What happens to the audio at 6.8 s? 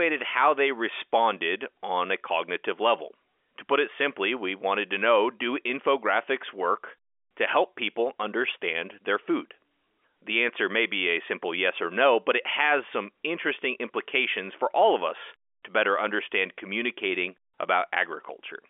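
Nothing goes wrong at 6.8 s: the speech continues intact there, heard through the ordinary narrow band of G.711 telephone coding, with nothing above 3.6 kHz.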